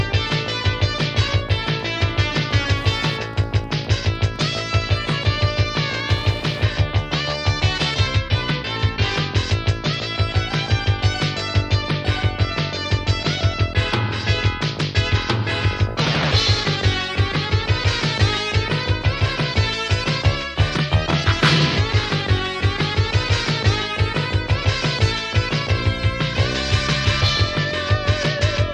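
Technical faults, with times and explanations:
1.12 to 6.64 s, Wi-Fi interference: a steady ticking runs under the audio at a 102.4 ms interval, close to ten ticks per second, sitting around 25 dB below the signal. This is the beacon of a nearby Wi-Fi radio. Its bursts of RF energy are picked up by the audio circuitry and rectified by a nonlinear stage, turning each transmission into a short audible click at the beacon's fixed repetition rate.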